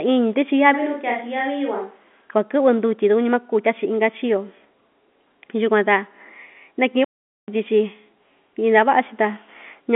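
Switch to a distant microphone, 0.76 to 2.22 s: the speech abruptly turns hollow and roomy, about 5 dB quieter, with more room noise, likely because a farther microphone replaced the close one. Playback stall, 7.04 to 7.48 s: the speech cuts to silence for about 0.44 s mid-flow, then resumes, likely because the player ran short of data. Throughout, the telephone-band G.711 coding keeps the sound below about 3.8 kHz.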